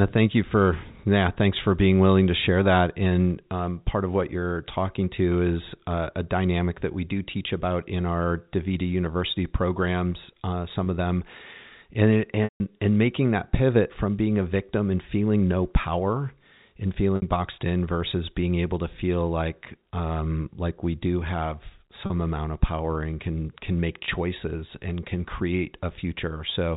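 Packet loss with pitch repetition breaks the speech five times: 10.84–10.86 s after "programs uh", 12.44–12.60 s before "and making that pivot", 17.16–17.22 s after "feeling no power and", 22.06–22.10 s and 24.06–24.08 s. The receiver loops the last pitch cycle, so short gaps sound like a brief buzzy hold. The 160 ms gap fades to silence. Gaps are multiples of 20 ms, which fits 20 ms packets. The waveform shows identical repeating cycles that taper out, and the spectrogram shows flat, frozen harmonics within the narrow telephone band.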